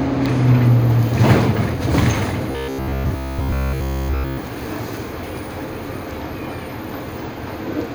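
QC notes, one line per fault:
2.52–4.38 s, robotic sound from repeated short buffers: the entire stretch becomes a rigid metallic buzz near 66.7 Hz, likely from a 15 ms slice being looped while fresh audio arrived too slowly. A spectrogram shows evenly spaced harmonic lines, and the waveform shows identical repeating cycles.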